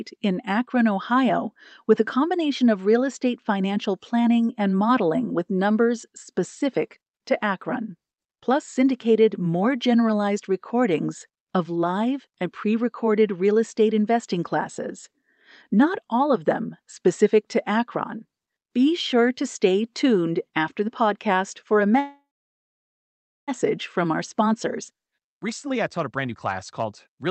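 Call audio freeze from 21.99 to 23.50 s: right after "the podcast for a", the sound stops and is held as a short fading buzz, then about 1.25 s of silence. This is likely packets stalling in transit and the jitter buffer running dry. When they arrive, the audio resumes where it left off, so roughly 1.5 s of gap is inserted and nothing is lost.

Jitter buffer speed-up from 24.06 s to 27.30 s: having built up that 1.5 s of extra delay, the receiver trims it back by repeatedly cutting out tiny pitch-period slices. The speech runs at about 113% speed at unchanged pitch and sounds hurried. Throughout, the Opus call path's top end stops near 8 kHz.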